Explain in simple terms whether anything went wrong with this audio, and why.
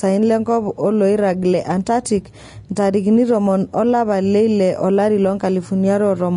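Throughout the speech, the upper range sounds hissy and grainy and sharp sounds are smeared, most likely from heavy Vorbis compression turning fine detail into noise.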